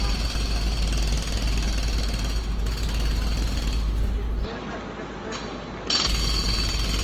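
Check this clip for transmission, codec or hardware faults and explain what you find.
There are three problems here: a codec smear running through the whole clip, a buzzy stretch in the middle, and a patch where the sound goes duller and thinner.

Generation loss runs throughout. The audio has a swirly, hollow character and blurred attacks, more damage than a single 48 kbit/s Opus encode should leave, although content still reaches about 20.2 kHz. The likely cause is re-encoding around seven times. Each decode-and-encode pass quantises again on a shifted frame grid, so the noise and spectral gaps pile up.

From 2.84 to 3.69 s there's a filter restarted on every block. The filter drops its memory at each block boundary and starts from silence, which puts a small transient at the head of every block. Here that comes out as a 25 Hz buzz, meaning blocks roughly every 40 ms. It gets louder and quieter with the level of the sound itself.

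From 4.44 to 6.06 s the input switched to a poorer device, likely a different mic or a headset's call mode. There's no gap at the switch. The sound simply goes dull, drops by about 5 dB, and picks up a new noise floor roughly 30 dB under the signal. At 6.06 s the fuller sound returns.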